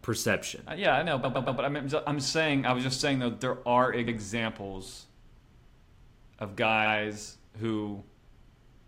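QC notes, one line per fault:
1.23–1.58 s, repeated frames: after "yeah I know", a 116 ms block of the coded stream plays three extra times before "I'm I'm saying I", so the sound stutters and the clip gains 348 ms.
4.07–4.16 s, repeated frames: after "saying though there are", a 93 ms block replays once, which fits a run of about four frames. There is a single stutter, adding 93 ms.
6.85–6.95 s, repeated frames: the same 93 ms block length replays once, producing one stutter and adding 93 ms.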